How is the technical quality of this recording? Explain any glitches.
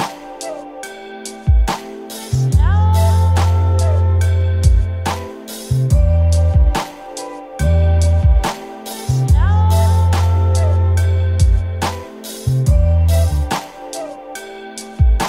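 No glitches or faults heard.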